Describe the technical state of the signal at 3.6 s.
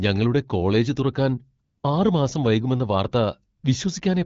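From 3.57 to 3.63 s the real background drops out for about 60 ms, replaced by a smooth, even hiss that switches in and out abruptly. This is AMR comfort noise: the phone treated the moment as silence, sent no speech frames, and the receiver synthesised filler noise from a rough level and spectrum estimate.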